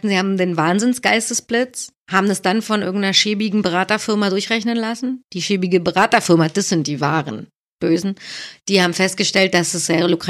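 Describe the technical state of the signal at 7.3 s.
At 7.3 s the speech signal is intact, with no audible fault at that point.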